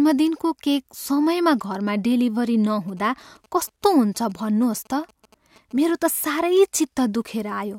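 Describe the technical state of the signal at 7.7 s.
At 7.7 s the speech signal is intact, with no audible fault at that moment.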